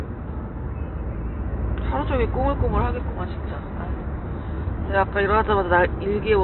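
No technical faults are audible.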